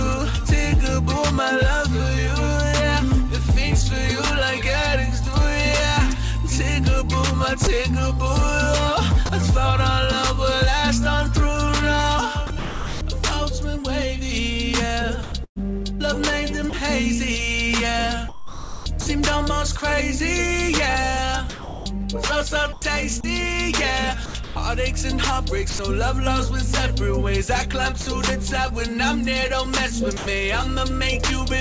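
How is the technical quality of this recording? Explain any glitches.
The recording has two kinds of glitch, both gaps filled with synthetic noise. It went over a call path with nothing above 8 kHz, which fits a wideband codec like G.722.

Sound dropped by the voice detector: at 7.64, 9.26, 28.01 and 30.17 s, short bits of 30 to 90 ms give way to steady noise or near silence. The sender's detector likely judged those moments to be background and stopped sending, and the receiver patched the holes with comfort noise.

Sound chopped by the voice detector: across 12.47 to 13.01, 15.23 to 16.73, 18.29 to 19.07 and 21.50 to 25.79 s, the detector likely flips on and off repeatedly. That cuts out between about 0.24 and 0.78 s of sound per stretch, so the audio gets choppy.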